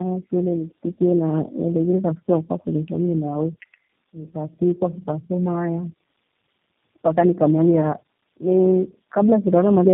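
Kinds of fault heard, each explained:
Tandem speech coding: Speech sounds rough, muffled and warbly with nothing above 3.7 kHz, which fits the call being decoded and re-encoded through three low-rate speech codecs in a row.
Electrical switching spike: A sharp snap lands at 5.08 s, right after "wakwa fulethomie nawe fukatikwa", likely an arc from a nearby switch or motor picked up by the line.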